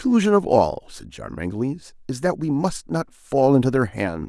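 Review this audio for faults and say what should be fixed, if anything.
Nothing here needs fixing.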